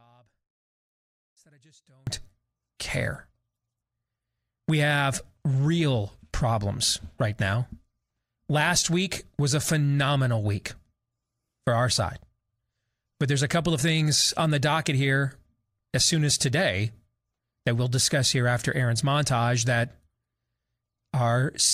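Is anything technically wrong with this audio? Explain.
Yes. An audio dropout to a faint residue runs from the start to 2.07 s. Only a faint residue, about 35 dB down, is audible, likely from an upstream break while the path stayed live. Full level returns abruptly, not as a fade.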